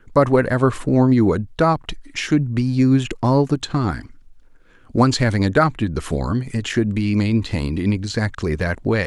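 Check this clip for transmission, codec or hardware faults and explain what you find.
Nothing in the speech points to a fault anywhere in the chain between source and playback.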